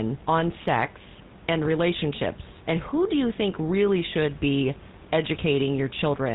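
Throughout the speech, the GSM full-rate codec leaves a buzzy, gravelly roughness and nothing above 4 kHz, harsher than smoother narrowband codecs, which fits 13 kbps; room noise sits about 22 dB below.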